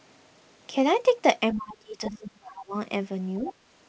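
From 1.53 to 2.74 s the speech is pulled down in level, by about 30 dB at its deepest, for roughly a second in total. This is speech suppressed in double talk. The echo canceller likely mistook overlapping talk for echo and attenuated both.

From 2.07 to 2.19 s a second, quieter voice comes through, about 15 dB below the main speech. This is the other side's voice leaking through. Loudspeaker playback was likely picked up by the microphone and not fully cancelled.

At 3.40 to 3.45 s the speech dips again, more gently, by about 5 dB. That is speech suppressed in double talk once more, likely from overlap. Straight after, from 3.46 to 3.53 s, the other side leaks through again, about 15 dB down. The call path band-limits everything to 8 kHz, which fits a G.722 codec.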